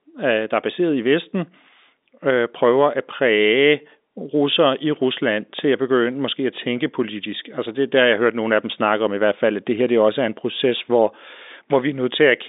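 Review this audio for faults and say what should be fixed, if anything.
Nothing stood out on listening, so there is nothing to fix; the speech carries the narrow band of G.711 telephone coding, with nothing above about 3.8 kHz, and that is simply the format at work.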